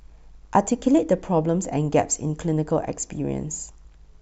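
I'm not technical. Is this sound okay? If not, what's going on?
Yes, this speech recording sounds fine. Nothing in it needs attention or fixing.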